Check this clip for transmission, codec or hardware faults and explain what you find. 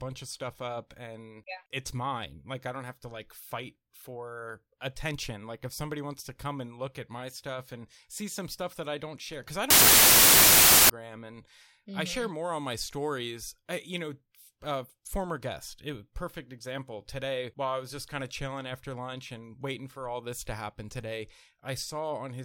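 There's one fault here, a wrong sample width. From 9.70 to 10.90 s, just after "don't share cause I", the speech sinks into loud noise, runs 1.33 times too fast and higher in pitch. That fits packed 24-bit data being read as 32-bit, which builds samples from mismatched bytes.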